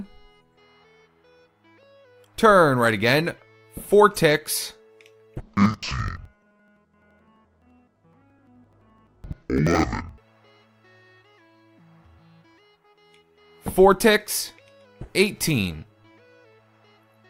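From 5.4 s to 10.26 s the audio shows interleaved audio read as planar. Each roughly 85 ms block, which fits a 4096-sample block, is split into halves played together at half speed. The sound drops an octave, doubles, and chops at about 11.7 Hz.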